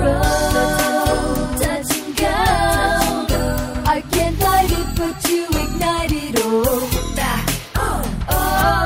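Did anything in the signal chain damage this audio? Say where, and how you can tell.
No, nothing along the signal chain has left an audible mark on this audio, and the signal holds steady throughout with no point where any stage can be heard to have disturbed it.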